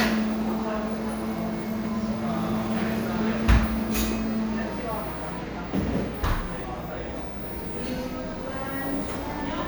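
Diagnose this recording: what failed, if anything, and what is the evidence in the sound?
Nothing failed; no fault is audible in this recording.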